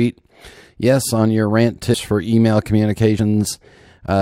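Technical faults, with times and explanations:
1.93 s and 3.18 s, compressed frames skipped: the audio jumps forward about 150 ms between "on your rant" and "for email", then about 70 ms after "for email". The gaps suggest whole frames of roughly 23 ms were dropped.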